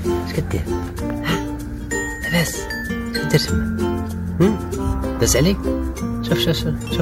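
Throughout the clip, crude rate conversion leaves a gritty, inharmonic fizz riding on loud and bright passages. The pattern points to 32 kHz audio raised to 48 kHz by repeating nearest samples unfiltered, leaving stair-stepped waveforms and spectrogram images around 20 dB down.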